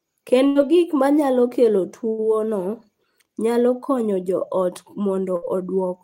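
Bursts of packet loss at 0.47, 2.09 and 5.36 s: packets went missing, so the last sound was held and faded for 60 to 90 ms, then speech skipped ahead, before "gik ma nyalo kelo" first, after it second.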